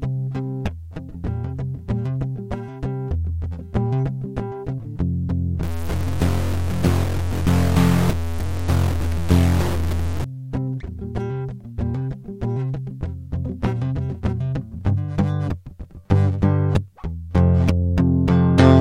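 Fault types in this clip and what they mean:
Stuck bit: harsh, buzzy distortion over the music from 5.63 to 10.24 s, likely one high data bit held fixed, shifting about half the samples.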